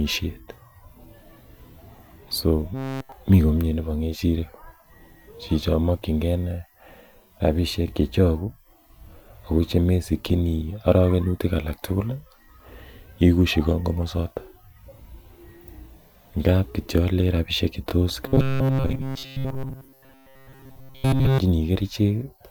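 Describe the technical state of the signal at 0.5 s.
At 0.5 s the signal is intact, with no audible technical fault at that moment.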